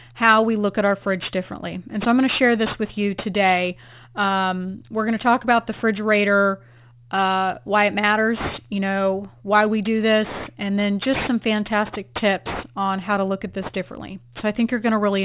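Aliasing runs through the whole speech clip. The audio was taken from 48 kHz down to 8 kHz without a proper anti-alias filter, so content above the new 4 kHz limit folds back below it as unrelated tones, roughly 15 dB under the speech. Sibilants come out gritty and metallic, with energy packed right up to 4 kHz. Simple band-limiting would sound muffled but clean, and these folded components don't follow the voice's pitch.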